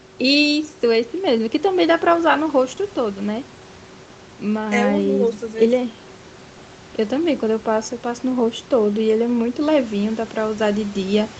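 Nothing goes wrong here: the speech comes over the call path with its top end stopping around 8 kHz, as expected for a call, and the room's background noise sits about 25 dB under it without anything breaking in.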